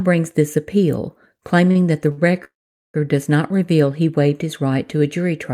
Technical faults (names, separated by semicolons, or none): short stall from a late packet; call audio freeze